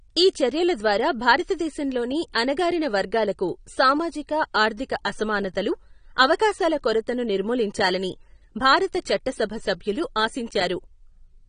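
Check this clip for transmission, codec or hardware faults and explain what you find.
The clip shows two faults: plainly audible codec damage throughout and one pre-echo.

AAC compression runs through the whole speech clip. Nothing survives above 9.7 kHz, and the audio sounds dull and smeared with a watery warble. The likely cause is AAC-LC at a low bitrate, which fits roughly 32 kbps and forces the encoder to lower its cut-off and coarsely quantise bands. On a spectrogram this shows as a flat ceiling at 9.7 kHz with patchy holes below it.

Pre-echo comes at 2.33 s, between "ఈ చర్యల ద్వారా భారతదేశంలోని" and "అణగారిన వర్గాలకు సామాజిక ఆర్థిక". A sharp onset late in a transform block spread its quantisation noise backwards about 16 ms, so a short hiss leads the attack and softens it. A waveform shows low-level fuzz before the onset, and a spectrogram shows a broadband smear ahead of it.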